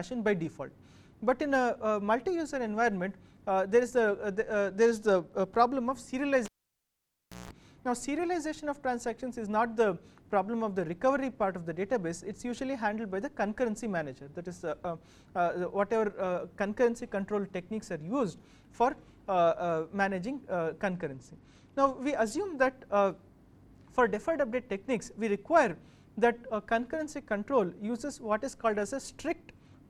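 From 4.31 to 5.33 s and again from 20.92 to 22.41 s, a Bluetooth SBC bit pool drop dulls the treble and adds gritty noise, consistent with the bit pool falling from 28 to 13, about 102 kbps. Between 6.45 and 7.51 s, a cable is pulled and plugged in: a pop, about one second of near silence, a 167 ms burst of 60 Hz mains buzz, then a second pop as the sound returns.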